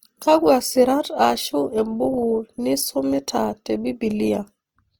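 Throughout the speech, the signal has likely been squeezed through Opus compression in its music mode, at a bitrate that fits about 24 kbps. Short of bits, the encoder fills bands with folded or noise content, so tones sound plainly rough and grainy, though sound still reaches about 20.3 kHz.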